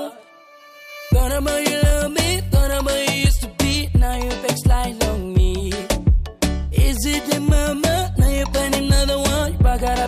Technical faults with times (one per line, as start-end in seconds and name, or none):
8.16-10.07 mains hum